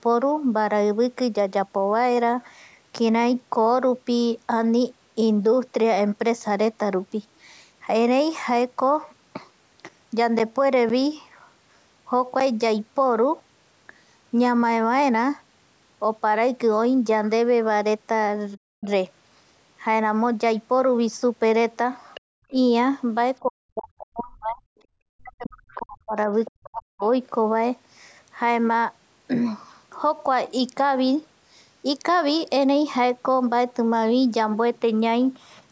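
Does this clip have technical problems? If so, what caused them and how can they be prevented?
Yes. Periodic USB or driver dropouts occur from 9.89 to 13.41 s. Around seven gaps of roughly 10 ms of silence recur every 0.5 s as ticks. Prevention: stop background tasks that stall the USB bus or audio driver.

The other side's voice leaks through at 18.53 to 18.85 s, 22.14 to 22.51 s, 25.71 to 25.82 s and 26.45 to 26.51 s, about 20 to 30 dB below the speech. Its likely cause is loudspeaker echo that the canceller left behind. Prevention: use a headset.

Speech is suppressed in double talk. At 18.57 to 18.9 s it dips by up to roughly 20 dB. From 23.42 to 27.04 s it drops by up to roughly 40 dB, for about three seconds in total. The likely cause is an echo canceller cutting both voices at once. Prevention: use headphones so there is no echo to cancel.

Background gated by the echo canceller: from 22.21 to 22.5 s the room sound drops by about 37 dB, then returns. 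Prevention: use headphones, or set gentler echo suppression.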